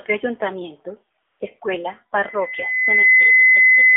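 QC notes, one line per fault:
Throughout: AMR narrowband mobile codec. The speech sits in a telephone band of roughly 300 Hz to 3.6 kHz, with nothing above. The codec rebuilds the voice from a vocal-tract filter excited by a handful of pulses per subframe. The buzzy, synthetic edge on every syllable is plainly audible and fits a low AMR-NB mode of about 7.4 kbps, where too few pulses remain to carry the natural texture of the voice.
1.26–1.40 s: AMR comfort noise. For about 140 ms the real background drops out and a smooth, steady hiss takes its place, switching in and then out again. The transmitting side treated this stretch as silence and stopped sending speech frames. The receiver then filled the gap with noise generated from a rough sketch of the background's level and spectrum, so the texture changes abruptly at both edges.
2.23 s to the end: loudspeaker feedback squeal. Just after "ayuntamiento escuela" a pure tone at 2 kHz appears and swells over roughly a second until it stands about 10 dB above the speech, then holds to the end of the clip. 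A microphone is hearing the loudspeaker it drives, and at 2 kHz the loop gain exceeds one, so that frequency keeps reinforcing itself until the system limits it.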